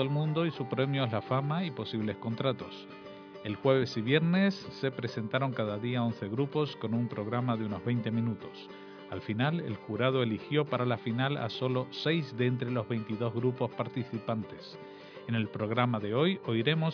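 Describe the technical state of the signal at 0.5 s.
At 0.5 s the signal is intact, with no audible fault.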